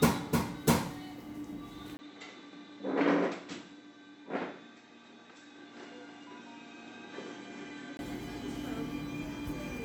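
At 1.97 s, after a 20 ms gap, the sound turns dull and boxy. The input likely switched to a poorer device. Nothing passes above 7.8 kHz. Level falls around 5 dB, with new noise roughly 30 dB below. Clarity returns at 7.99 s.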